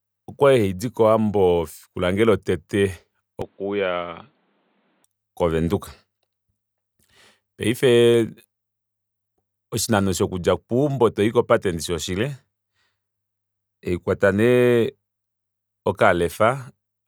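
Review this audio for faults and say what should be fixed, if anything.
From 3.42 to 5.04 s the sound suddenly goes dull and boxy, with nothing above about 4.5 kHz. It drops a few dB in level and picks up a faint new noise floor, then snaps back to the fuller tone. There's no gap at either switch. That pattern points to an input switched to a poorer device, likely a fallback mic or a headset call profile, briefly taking over. Lock the recording input to one device so the system can't hop mid-take.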